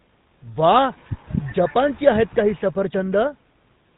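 Throughout, the speech sounds buzzy and gravelly, with nothing above 4 kHz: plainly audible GSM full-rate codec damage, consistent with a 13 kbps pulse-excited vocoder.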